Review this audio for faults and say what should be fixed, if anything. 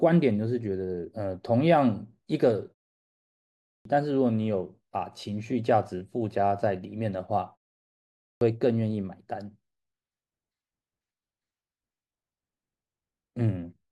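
Clipped start after a pause occurs at 3.33–3.85 s and 7.90–8.41 s: after pauses of 0.67 s and 0.41 s, the output path sleeps and takes about half a second to wake, swallowing the first 0.52 s and 0.51 s of speech. Keep the output device active, or pre-roll it, through short silences.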